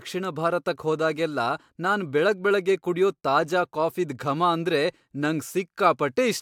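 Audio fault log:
No audible faults found anywhere in the speech recording.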